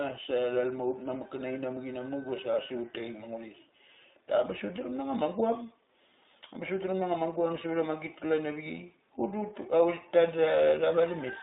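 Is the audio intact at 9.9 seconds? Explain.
No. The iLBC codec is at work at 9.9 seconds, as it is across the whole clip. The speech is squeezed into a narrowband line of roughly 250 Hz to 3.7 kHz, and each 20 ms frame's excitation is coded on its own, at a rate that fits 15.2 kbps. The result is a plainly audible muffled, slightly rough and synthetic quality, with no brightness above the band edge.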